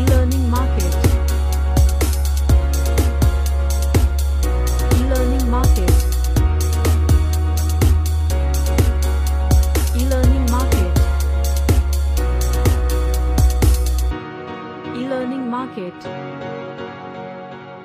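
No technical faults can be heard anywhere in the audio, and the signal stays continuous and steady throughout.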